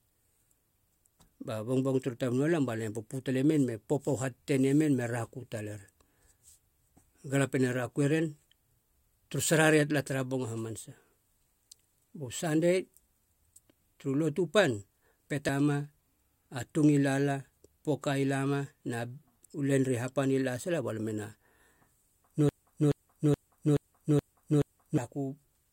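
At 15.49 s a brief glitch cuts into the speech. This is damaged data in a compressed stream: corrupted bytes made the decoder misread the frames at that point, lose sync and pick up again at the next valid frame header.

From 22.49 to 24.98 s the same 0.43 s fragment repeats six times, back to back, in a broken-record loop. The likely cause is a stall in the player or stream that kept resending the last fragment it held, so the speech due there is lost.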